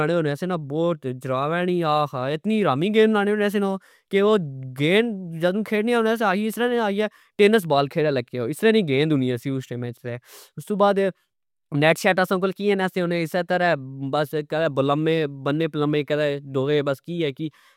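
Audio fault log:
No technical faults can be heard in this speech recording.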